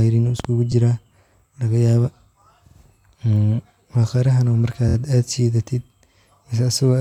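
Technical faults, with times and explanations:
0.40–0.47 s, loud pop: two sharp pops in quick succession stand out roughly 10 dB above the speech, which carries on beneath them. This is likely a brief voltage pulse, from a switch, plug contact or static discharge, entering the signal chain.
0.72 s, 2.66–2.76 s and 4.88–4.95 s, repeated frames: the speech stutters as short slices replay. Each stretch of compressed frames was played again, adding about 12 ms, 93 ms and 70 ms respectively.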